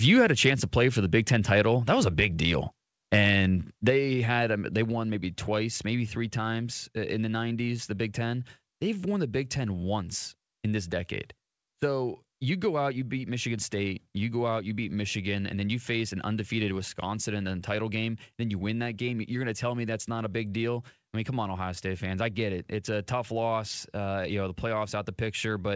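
Around 3.13 to 3.34 s the loudest bits of speech come out harsh and crackly, with the peaks squared off about 5 dB past the converter's limit. That's most likely microphone overload: input gain set too hot, so the converter flattens the tops of maybe one or two percent of samples. It returns briefly from 3.88 to 3.90 s, only about 1 dB over this time.

Right at 3.90 s the whole thing, speech and background together, drops by about 4 dB in one abrupt step. That sounds like the microphone volume stepped down, likely the call software reacting to that clipped peak by lowering the input level. Through the G.722 call path there's nothing above 8 kHz.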